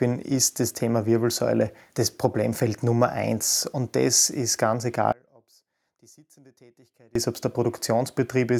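Speech, where after "das ist ganz" the sound abruptly collapses at 5.12 s to a faint residue about 35 dB down, returning at 7.15 s on "ist ob es der": an audio dropout to a faint residue lasting 2.03 s, likely from a signal path that stayed live but lost its source.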